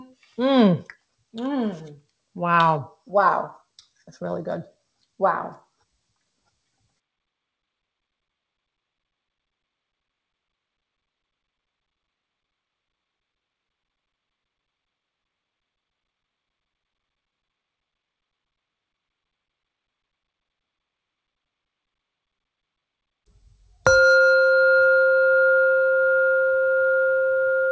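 Channel delay (comb filtering) runs from 2.77 s to the end. One channel of the audio lags the other by roughly 0.2 ms before they are summed to mono, so shared content cancels at evenly spaced frequencies. The first notch falls near 3 kHz and gives a fixed, hollow, phasey colour. Nothing is heard above 8 kHz, which fits a G.722 call path at 64 kbps.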